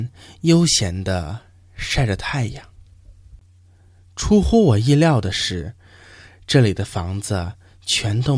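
Speech recording, no technical faults heard.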